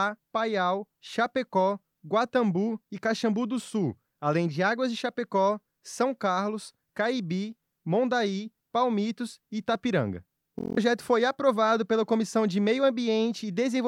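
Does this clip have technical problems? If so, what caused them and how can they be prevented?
Yes. From 10.59 to 10.77 s the audio turns into a steady buzz at about 43.1 Hz. This is a system hang loop: the system froze while the sound hardware replayed one 23.22 ms slice eight times, which fits a 1024-sample buffer, and about a fifth of a second of real audio was lost. Preventing it means fixing the driver or system stall, for example by updating audio drivers and reducing CPU load during recording.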